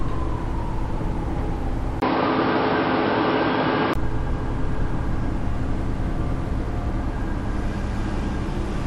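At 2.0 s the recording likely switched its input to a poorer device, and it stays there until about 3.96 s before returning. The substitute path passes nothing above about 5.4 kHz, so the everyday sounds in this stretch lose their top end and turn dull and boxy. A brief gap of about 20 ms marks the switch. The loudness barely changes, and a faint new noise floor sits far beneath the sound.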